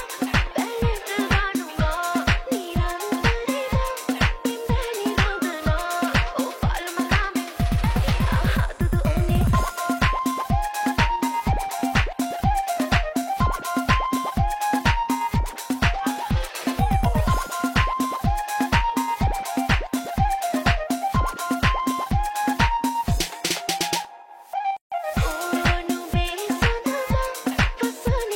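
At 24.77 s a gap at a join of encoded pieces drops in: about 150 ms of silence from untrimmed encoder delay and padding, a blank vertical band with smeared edges, before sound resumes.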